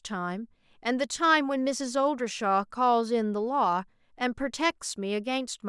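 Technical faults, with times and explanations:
No technical faults, so there are no times or explanations to give.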